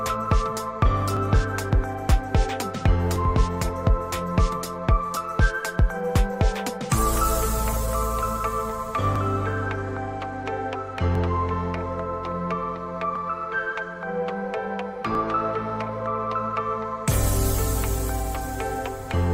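A short bit of audio with periodic USB or driver dropouts: from 1.17 s to 19.14 s there's a tick every 2.0 s, about ten in all. Each time something stalls the bus or driver and a couple of milliseconds of sound just get skipped, leaving a small click.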